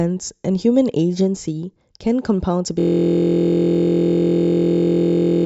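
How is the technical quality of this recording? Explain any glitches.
There's one serious glitch: from 2.80 s to the very end, the speech collapses into a system hang loop. The computer or audio driver stalled, but the sound hardware kept replaying the same small ring buffer. It's a 23.22 ms slice, which fits a 1024-sample buffer, repeated exactly over a hundred times. Because the slice is so short, you don't hear a stutter. You hear a steady, mechanical buzz at about 43.1 Hz that replaces the speech until the clip ends.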